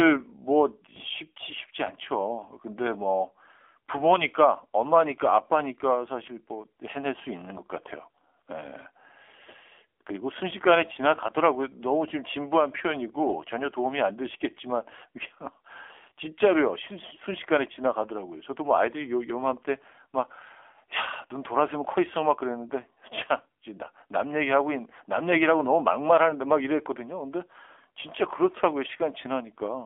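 From start to finish the speech has passed through the AMR narrowband mobile codec, the AMR-NB coder of 2G and 3G calls, which rebuilds each 20 ms frame from a vocal-tract model excited by sparse pulses. The line band runs only from 300 Hz to 3.5 kHz, so everything above is gone and the low end is thin. The damage is plainly audible: a buzzy, synthetic edge to the voice that fits a low rate near 7.4 kbps.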